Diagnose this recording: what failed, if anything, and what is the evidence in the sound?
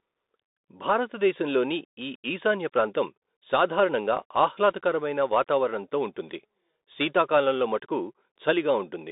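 The codec stage is the culprit: it's a Bluetooth CVSD headset codec, running right through the speech. Everything sits between roughly 250 Hz and 3.7 kHz, s sounds come out scratchy, and there's a granular hiss underneath, consistent with a 64 kbps one-bit delta stream whose step can't keep up.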